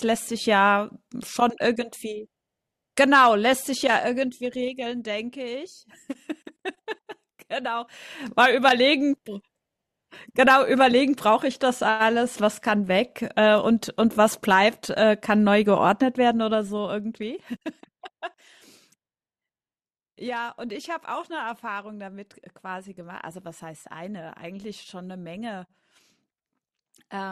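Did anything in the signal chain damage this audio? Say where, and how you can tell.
Yes. Zipper noise from an unsmoothed gain stage: at 3.67–4.97 s and 16.21–17.69 s the speech drops about 10 dB, then about 15 dB, in 2 dB jumps roughly four per second, each ticking.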